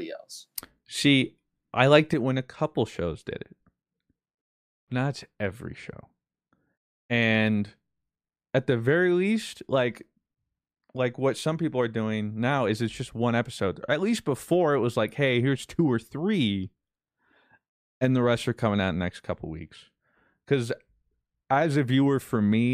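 A gain change was likely applied in a single step, with no ramp, at 2.14 s, right after "else see i liked". This sudden gain jump drops the speech and its background noise together by about 7 dB at once, and the level stays lower through the end.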